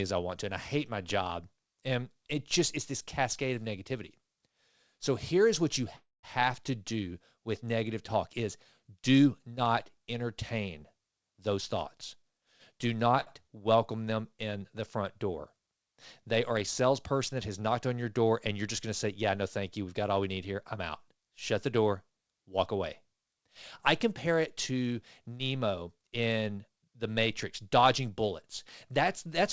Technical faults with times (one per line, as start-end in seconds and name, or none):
5.96-6.26 call audio freeze
11.12-13.14 jitter buffer speed-up
13.20-13.29 short stall from a late packet